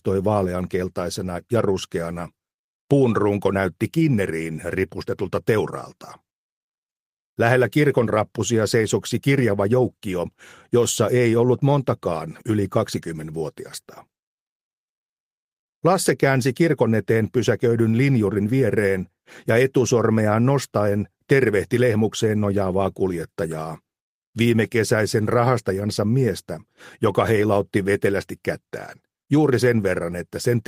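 Nothing is technically wrong with this clip.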